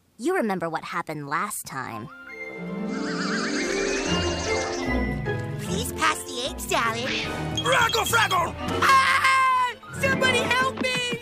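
A short, irregular burst of crackle and scratching breaks into the sound from 3.63 to 3.73 s. This is loose connector crackle: a worn or dirty contact making and breaking rapidly for about 0.1 s, chopping the signal into ragged fragments.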